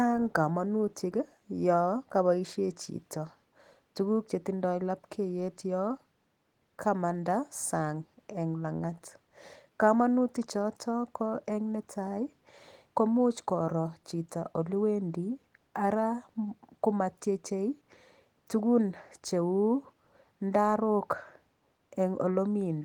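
No faults are present; the speech comes through full-band, with content reaching about 20.2 kHz and only light coding texture consistent with Opus in hybrid mode at around 20 kbps.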